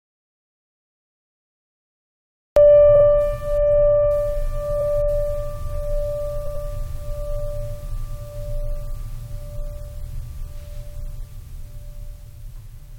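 The music opens in dead digital silence that is already under way when the clip begins and lasts until 2.56 s, with no room tone or hiss underneath, before the sound arrives abruptly. This is an audio dropout to silence: the input was most likely lost for that stretch, through a dropped connection or a mute, while recording carried on writing silence, so whatever played then is gone.

From there the music stutters three times. At 2.94 s a 46 ms slice plays twice more, adding about 93 ms. At 4.80 s a 46 ms slice repeats once. At 6.45 s a longer 93 ms slice plays twice more, adding about 186 ms. These are repeated frames: runs of compressed frames were written or sent again, and the block lengths fit runs of two and four frames. The decoder replays them, and the track grows by the repeated time.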